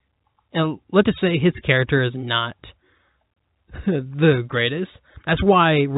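No technical faults are audible.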